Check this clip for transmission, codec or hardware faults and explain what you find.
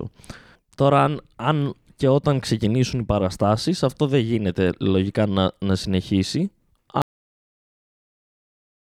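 One fault: a cut-off end. At 7.02 s, just after "λογικά να να συνεχίσει", the speech stops mid-sound because the final buffers never played. The waveform drops straight to flat digital silence for the remaining 1.9 s, and the spectrogram goes blank with no decay tail.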